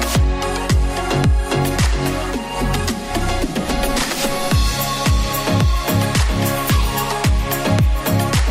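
Nothing in this audio catches the ear as a technical problem; it just rolls along without anything worth flagging.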